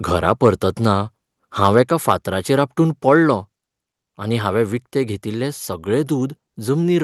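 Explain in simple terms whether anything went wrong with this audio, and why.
Yes, a couple of things. Around 1.64 to 1.67 s and again at 2.08 to 2.11 s, the loudest bits of speech get a harsh, crackly edge. That's likely microphone overload: the mic was set so hot that the tops of those peaks got chopped off.

Then at 3.09 s the whole thing, voice and background together, suddenly drops a notch in level. That sounds like the microphone volume being stepped down, likely the call software reacting to those crunchy peaks and turning the input down in one go.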